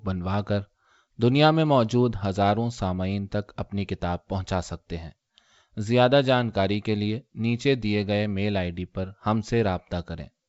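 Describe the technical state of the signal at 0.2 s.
At 0.2 s the speech is intact, carried cleanly through the WebRTC call path with its wideband codec's band limit at 8 kHz and no fault present.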